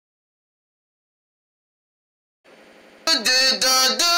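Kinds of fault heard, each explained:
System hang loop: the system stalled while the hardware replayed one 85 ms buffer (likely 4096 samples) five times at 11.7 Hz, giving a machine-gun stutter of identical repeating blocks on the waveform.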